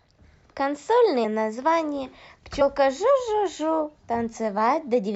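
Around 1.23 s the speech suddenly jumps ahead, losing roughly 100 ms of audio, which fits about four compressed frames of 23.2 ms going missing. That's compressed frames skipped: the decoder never played those frames, either because they weren't in the file or it threw them out as damaged. The overlap between neighbouring frames smears the join into a short blip, not a hard click. It happens again at about 2.6 s, this time losing around 70 ms, or roughly three frames.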